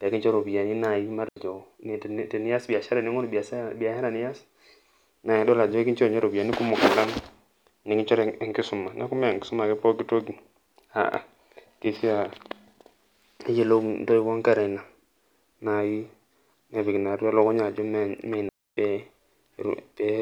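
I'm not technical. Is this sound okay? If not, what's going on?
No. The speech briefly cuts to near silence at 1.29 s for 80 ms, and again from 18.49 to 18.77 s. These clean gaps are digital wireless dropouts: the wireless link lost data, so the receiver muted itself.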